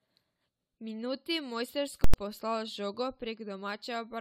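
Right from the start the whole speech clip has that swirly, hollow, smeared character of generation loss, and the likely cause is the audio going through a lossy codec like AAC-LC over and over, something like seven passes. Every re-encode quantises on a fresh frame grid, so the noise and spectral holes pile up. It sounds far rougher than a single 96 kbit/s-ish encode would, consonant attacks go soft, and there's still content up to about 20.2 kHz.

At 2.04 s you get a hard pop, then nothing, then another pop at 2.14 s. That's invalid numbers at full scale: some calculation spat out infinite or invalid values, and they got pinned to the largest positive or negative value for one block of about 93 ms, which fits a 4096-sample block. The output just sits flat at one extreme value, far beyond the speech peaks, so you only hear the jump in and the jump out.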